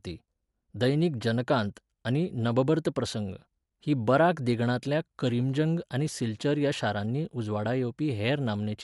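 Throughout, the speech is dull and cut off above 11.5 kHz, with rough noise filling starved spectral lines. This is likely Dolby Digital compression at a low bitrate, around 64 kbps.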